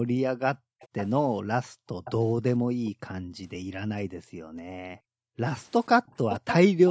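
The echo canceller gates the background at 0.54–0.8 s, dropping room sound by up to about 40 dB. A delayed copy of the speech follows at 0.8–1.07 s. This is an echo leak, likely a far-end loudspeaker echo the canceller missed. The copy lags by about 0.49 s and sits about 15 dB down. Gating returns at 1.68–1.95 s, and echo again at 2.04–2.12 s. Gating at 2.59–2.93 s overlaps a faint echo at 2.85–2.91 s, about 25 dB down. A long gated dip runs 3.2–5.44 s. The strongest echo comes at 6.06–6.55 s. It lags about 0.54 s and is only about 5 dB below the speech.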